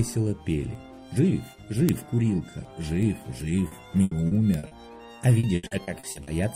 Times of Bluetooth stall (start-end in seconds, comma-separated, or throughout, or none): none